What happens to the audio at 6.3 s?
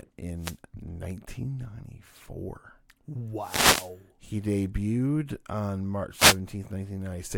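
A brief swish of static sounds in the speech from 6.13 to 6.39 s, a wireless microphone noise hit where the radio signal faded and receiver noise rose.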